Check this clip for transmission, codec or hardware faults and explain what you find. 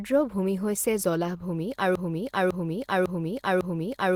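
Two faults are audible: codec damage across the whole clip, and a repeating loop that takes over the second half.

Opus voice compression runs throughout. The speech sounds hoarse and slightly robotic, with coarse texture, though the top end still reaches about 20.2 kHz. That points to hybrid-mode Opus at a low rate, around 16 kbps. The low band is coded by linear prediction with a crude excitation, and a thin upper layer sits above 8 kHz.

A broken-record loop starts at 1.95 s and lasts to the end. A piece about 0.55 s long plays four times back to back, and the speech that should have followed is gone. The likely cause is a player, encoder or stream stalling and resending the last fragment it held.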